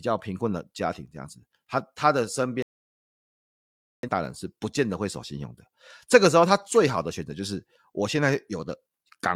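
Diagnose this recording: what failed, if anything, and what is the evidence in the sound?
The failure is at the broadcast reception stage, a digital broadcast dropout. The speech cuts to silence at 2.62 s and comes back at 4.09 s, about 1.4 s later, with that stretch simply gone. The receiver lost the signal or rejected corrupt frames, which fits a few dozen frames, and muted until clean ones arrived.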